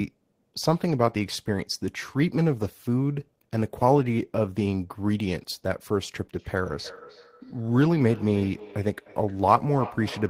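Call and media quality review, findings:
Feedback echo between two devices, 6.39 s to end: speech repeats roughly every third of a second, about 18 dB down. Other device's speaker looping into this mic.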